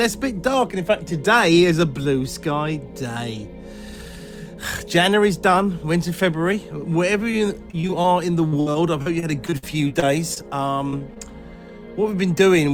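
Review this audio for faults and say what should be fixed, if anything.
Brief smears or wobbles appear at 7.31 to 7.35 s, 10.90 to 10.94 s, 10.98 to 11.02 s and 11.14 to 11.18 s. These are short concealed packet losses: about 20 ms of audio failed to arrive each time, and the receiver covered the hole by extending the preceding sound before blending back in.

Choppy, robotic stretches run from 7.71 to 8.06 s and from 8.48 to 10.38 s. This is repeated packet loss. The first span has about five holes, roughly a quarter of it patched. The second has around a dozen, up to 60 ms long, about 17% patched. Because each continuation runs into the next loss, the sound turns choppy and pieces go missing.

To fix both, improve network stability on the call path and enable forward error correction or a larger jitter buffer, so that lost or late packets are recovered instead of concealed.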